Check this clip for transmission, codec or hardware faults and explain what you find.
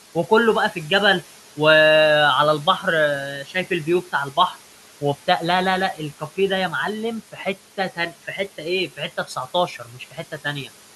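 One fault turns up twice: speech cut by the noise suppressor, at 3.44–3.71 s and 9.79–10.33 s. The suppressor mistook quiet speech for the room noise, which sits about 21 dB below, and ducked it by about 9–10 dB for roughly a tenth of a second each time, leaving those bits swallowed and faint.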